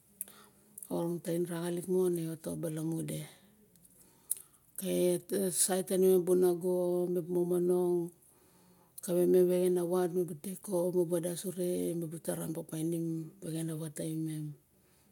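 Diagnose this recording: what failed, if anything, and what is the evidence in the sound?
Nothing failed; no stage shows any fault in this recording.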